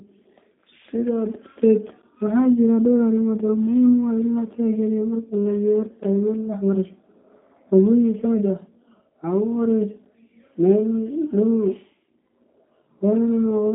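The whole recording has been squeezed through a G.729 codec, which rebuilds speech from a vocal tract filter, a pitch predictor and a handful of pulses per frame rather than storing the waveform itself. The sound fits an 8 kbit/s G.729A link. The line band runs from 200 Hz to 3.6 kHz, with nothing above 3.7 kHz, so the speech sounds thin and boxed-in. The coding damage is plainly audible as a rough, slightly synthetic quality to the speech.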